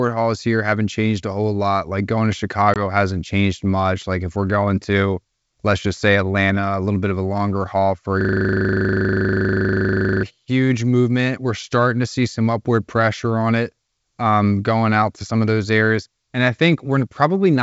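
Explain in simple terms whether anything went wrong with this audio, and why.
At 2.74 s the speech drops into a sudden hole, about one 20 ms packet long, then comes back with slight roughness. This is packet loss on an ADPCM call, which briefly threw the decoder out of step.

From 8.21 to 10.23 s one 40 ms scrap of sound repeats 51 times, a rapid 25-per-second stutter. This is a system hang loop: the computer froze while the sound hardware kept replaying its buffer.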